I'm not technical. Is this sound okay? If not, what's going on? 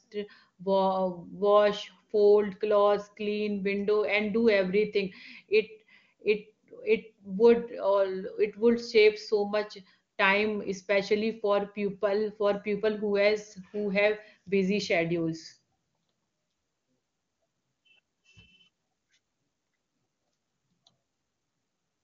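Yes, it sounds fine; nothing here is wrong.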